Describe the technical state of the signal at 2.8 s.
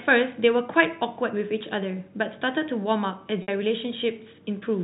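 At 2.8 s the speech is intact, with no fault at that moment, only the narrow band of the G.711 telephone coding, which passes nothing above 4 kHz.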